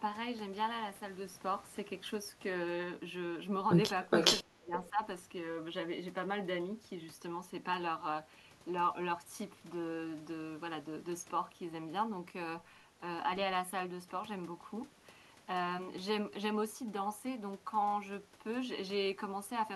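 From 4.1 to 4.42 s an echo leak is heard: a copy of the speech returns about 417 ms late and roughly as loud as the original. The far end's echo canceller likely failed to remove what its microphone picked up from its loudspeaker. On a spectrogram the same harmonic pattern appears twice, shifted by that delay. In the waveform the copy's envelope nearly matches the direct sound.

From 4.43 to 5.01 s the speech is suppressed in double talk. The level dips in pieces, around 25 dB at its deepest, for about 0.4 s in all. The echo canceller was likely unable to tell the talker from loudspeaker echo while both sides spoke, so it turned everything down. The waveform shows sudden notches in the envelope. The spectrogram shows gaps in the harmonics.

Inside that stretch, at 4.84 to 4.9 s, a second brief echo leak comes back about 542 ms delayed and far quieter, around 30 dB below the speech. It appears only as a faint smear on the spectrogram.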